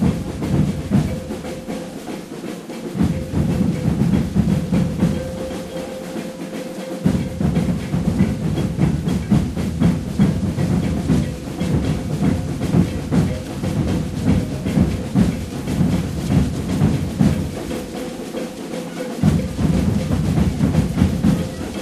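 Listening through these sounds, nothing stood out as a technical problem at any point.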